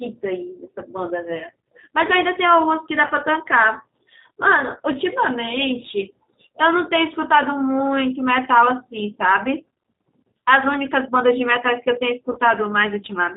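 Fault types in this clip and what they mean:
G.729 codec: the whole clip sounds like a low-rate speech codec at 8 kbit/s, rebuilding the voice from a filter, a pitch predictor and a few pulses per frame, so everything above 4 kHz is gone and the speech comes across noticeably rough and synthetic.
VoIP packet loss concealed by the speech codec: twice, around 3.07 s and 12.32 s, about 30 ms of audio went missing and the decoder papered over it by stretching its last sound into a fading buzzy tone or coloured noise, with the voice staying a bit weak afterwards.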